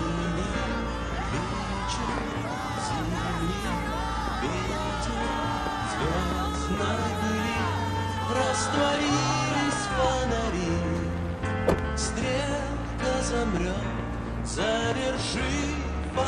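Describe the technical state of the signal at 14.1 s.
At 14.1 s the audio is intact, with no dropout, distortion or other fault audible at that point.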